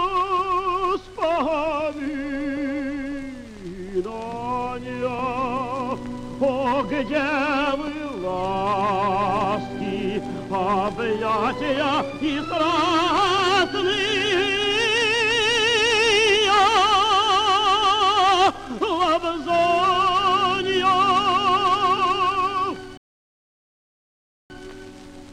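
At 22.97 s the player exhausted its store of downloaded audio and had to wait for more data to arrive, a rebuffering stall. Playback halts and the sound drops abruptly into silence, holding there until 24.5 s. When enough data has come in, the audio picks up at exactly the point where it broke off, so nothing is skipped or repeated, but the pause adds about 1.5 s to the running time.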